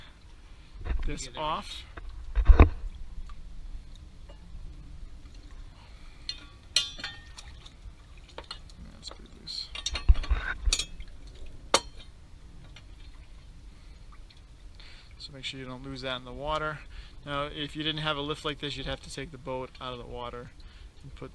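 Nothing in the recording points to a technical fault; the signal stays continuous and stable throughout.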